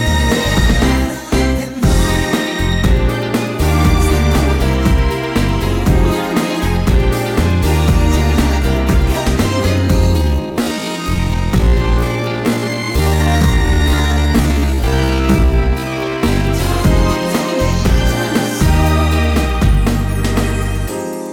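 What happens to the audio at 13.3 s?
At 13.3 s the audio is inside a time-stretched section running from 10.16 to 16.46 s, slowed to about 0.54 times normal pace with pitch unchanged. It's likely a stretch algorithm repeating short segments to lengthen the material, which leaves the passage dragging before normal pace returns.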